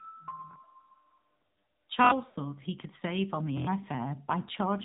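AMR narrowband mobile codec, throughout: the speech runs at about 7.4 kbps, so nothing above 4 kHz survives and the voice sounds buzzy and synthetic. Lost AMR speech frames, 2.30 to 2.36 s: two frames fail, and the decoder repeats earlier voice settings at falling level, giving a brief dip and warble.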